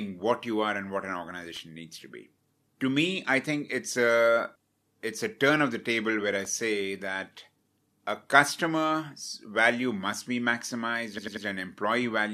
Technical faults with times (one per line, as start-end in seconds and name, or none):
1.56 electrical switching spike
4.62-4.83 repeated frames
6.45 electrical switching spike
11.17-11.45 repeated frames